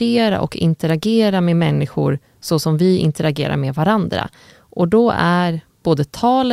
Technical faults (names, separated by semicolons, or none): bit error spike